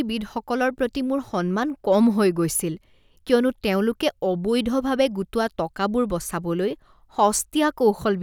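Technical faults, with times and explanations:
No technical faults can be heard in this speech recording.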